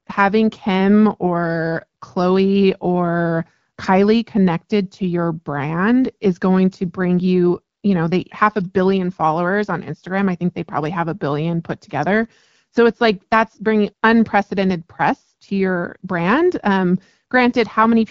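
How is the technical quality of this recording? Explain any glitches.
The technical quality is good, with no glitches to explain, and the speech comes through the AMR wideband (HD Voice) codec at 12.65 kbit/s clear and intelligible.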